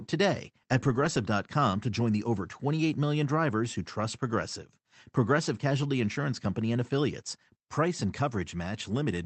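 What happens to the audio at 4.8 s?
Nothing goes wrong at 4.8 s: the speech passes through intact, carrying only the band-limited, coded character of the call path it travels through.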